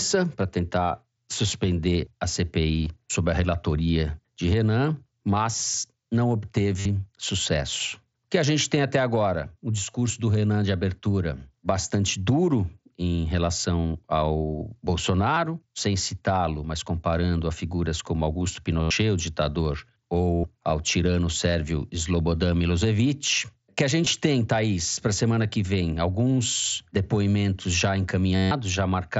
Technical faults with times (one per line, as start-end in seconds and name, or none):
2.84-2.86 concealed Bluetooth headset packet loss
6.80-6.85 concealed Bluetooth headset packet loss
9.91-9.94 concealed Bluetooth headset packet loss
15.35 concealed Bluetooth headset packet loss
18.82-18.91 concealed Bluetooth headset packet loss
20.35-20.44 concealed Bluetooth headset packet loss
24.05 concealed Bluetooth headset packet loss
28.36-28.51 concealed Bluetooth headset packet loss